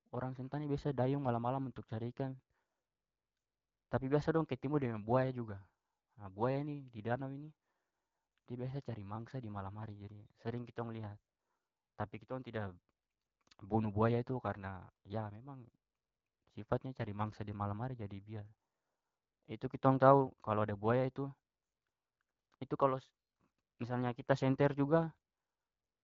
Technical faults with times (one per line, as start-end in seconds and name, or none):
none